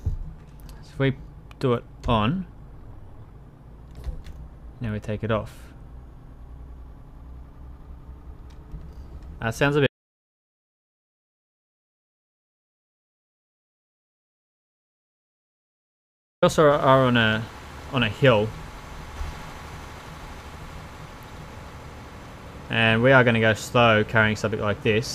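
The audio has an audio dropout to silence from 9.87 s to 16.42 s, roughly 6.6 s in which the sound stops mid-flow and returns just as abruptly, with whatever happened in between lost. The gap is silent with no room tone or noise floor at all, which separates it from a natural pause or a noise gate closing. A disconnected input or a broken link, with the recorder writing silence, is the likely cause.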